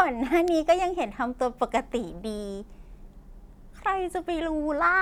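No technical faults can be heard anywhere in this speech recording. There is nothing to place on a timeline or trace back to a cause.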